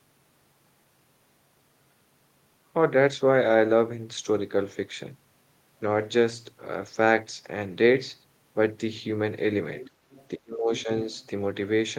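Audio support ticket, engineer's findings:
Other side's voice leaking through at 9.83–9.90 s, 10.11–10.28 s and 11.13–11.28 s, faint, roughly 20, 30 and 40 dB under speech, fading each time. Likely incomplete echo cancellation of loudspeaker pickup. Spectrogram: weak, separate harmonic traces beneath the main voice.

Speech suppressed in double talk between 10.37 and 10.89 s, dropping as much as about 30 dB across roughly 400 ms. Likely the echo canceller attenuating both talkers while the far end spoke. Waveform: envelope suddenly caved in; spectrogram: upper bands thinned or blank in patches.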